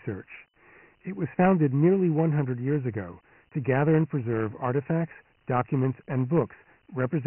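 The whole recording has been passed through Dialogic VOX ADPCM, the 4-bit adaptive coding used for phone menus and voicemail. The bandwidth and the coarseness point to the lower 6,000-sample rate, roughly 24 kbit/s. Nothing survives above about 3.1 kHz, so the speech sounds boxed-in and dull. The step-size adaptation lags behind the signal, and that leaves a heavy, gritty hiss trailing each syllable from start to finish.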